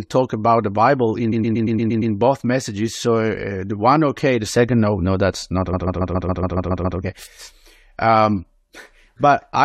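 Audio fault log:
1.31–2.13 s, repeated frames: a 116 ms snippet stutters seven extra times before "both messages"; the same compressed frames replay, adding 0.81 s.
5.72–6.98 s, repeated frames: after "no no that's not", a 139 ms snippet stutters nine extra times; duplicated compressed frames add 1.25 s.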